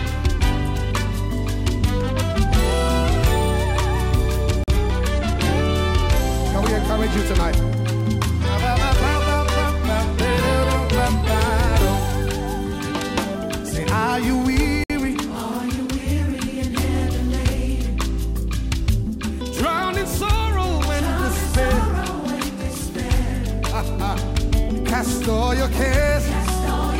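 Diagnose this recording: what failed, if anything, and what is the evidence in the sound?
Likely Bluetooth stall at the wireless playback buffer: the sound drops to silence for 43 ms at 4.64 s and 60 ms at 14.84 s, showing as clean full-band vertical gaps.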